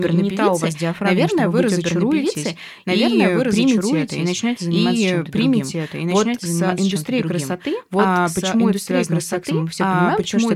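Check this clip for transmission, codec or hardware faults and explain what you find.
One fault runs through the whole clip: a doubled audio track. The speech is heard twice, a second full-band copy trailing about two seconds behind at roughly equal loudness. This likely comes from a slower second capture path or an edit holding two misaligned copies. Unlike acoustic echo or reverb, the copy has no decay tail, no room colouring and no repeats.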